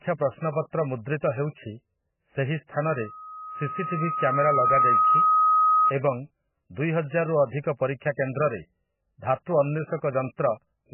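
The clip is speech. Throughout, it sounds heavily compressed: watery and swirly, with smeared attacks and nothing above 3 kHz. The likely cause is MP3 encoding starved of bits, which fits a very low bitrate of around 10 kbps. From 2.80 to 5.94 s, a loudspeaker feedback squeal appears. It is a single tone at 1.3 kHz. It swells over about two seconds and ends up about 5 dB above the speech. The loudspeaker's output leaked back into the microphone, and the loop gain at that frequency rose above one.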